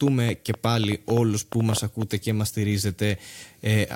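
A train of clicks runs from 0.08 s to 2.03 s, ending just before "και μας": roughly fifteen similar pulses at about 6.7 per second, unevenly spaced and peaking about 10 dB above the speech. These are likely interference or a faulty connection or power supply injecting repeated spikes, heard as irregular popping through and between phrases.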